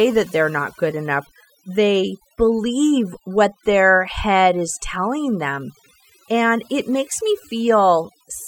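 Noise reduction set too strong runs throughout the speech, the overdone noise removal pushing individual frequency bands down or off wherever they sit near the estimated noise floor. Quiet voice detail vanishes with them, leaving near-silent gaps sprinkled with twinkling specks.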